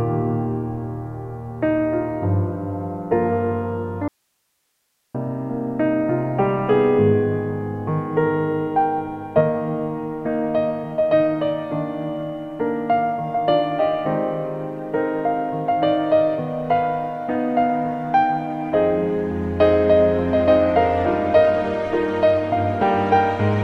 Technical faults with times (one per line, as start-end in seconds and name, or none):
4.08-5.14 audio dropout to a faint residue